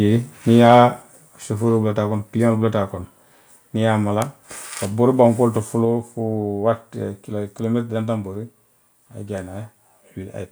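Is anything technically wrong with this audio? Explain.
Yes. Around 0.65 to 0.74 s there's a burst of microphone overload: a loud syllable drives the peaks about 1 dB past the converter's ceiling, so a small fraction of samples get their tops sliced flat. That gives a brief harsh, crackly edge, likely from input gain set too hot.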